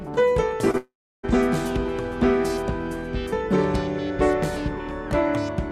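Right near the start, at 0.71 to 0.76 s, there's a short concealed packet loss: about 20 ms never arrived, so the decoder stretched the last bit of sound into a quick smear. Straight after, from 0.78 to 1.25 s, the audio buzzes or hisses briefly, fades, then sits silent for roughly 0.3 s, likely a long network dropout, with nearly half a second lost outright.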